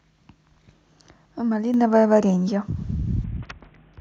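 At 1.74 s the microphone volume is stepped up: the input gain jumps by about 6 dB in a single step, so the speech and the background noise become louder together at that instant and stay at the higher level.

From 3.24 s to the end, a Bluetooth SBC bit pool drop sets in. The treble goes dull and a gritty, grainy noise rides on the speech, which fits the bit pool falling from around 28 to about 6, near 60 kbps, starving the upper sub-bands.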